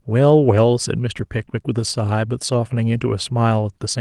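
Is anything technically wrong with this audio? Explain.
Yes. The call lost packets twice and filled both losses with lost packets rebuilt from error correction. At 1.17 to 1.23 s, roughly 40 ms of audio, which fits two lost packets, and at 2.93 to 2.95 s, about 20 ms, which fits one, were replaced by the lower-bitrate copies that the following packets carried in the Opus stream. There is no gap, but those moments sound briefly rougher and noisier than the surrounding speech.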